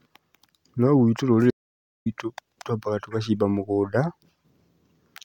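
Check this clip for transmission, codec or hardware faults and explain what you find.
There's one fault here, an audio dropout to silence, running from 1.51 s to 2.06 s. The speech cuts off mid-flow and the next 0.55 s is dead digital silence, with no room tone at all, before the sound snaps back in on "twambaga tũgacimba mũgũnda". That total absence of background points to the input likely being lost for a moment, say a link or device hiccup, while the recorder kept writing silence. Whatever was said in that gap is gone.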